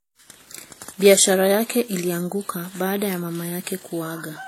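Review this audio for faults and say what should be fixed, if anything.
Transcoding between lossy codecs, throughout the clip: nothing reaches above about 16.2 kHz, and two different kinds of coding artefact sit on top of each other. The sound is likely the result of an earlier WMA encode at around 48 kbit/s being re-encoded as HE-AAC at around 32 kbit/s. The second encoder spent its small bit budget reproducing the first encoder's artefacts and added its own on top. To prevent it, encode once from the original uncompressed source rather than converting one lossy file into another.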